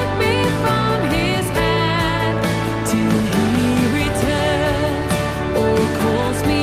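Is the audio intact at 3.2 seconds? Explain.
Yes, at 3.2 seconds the audio plays through cleanly, with no dropout, glitch or other fault.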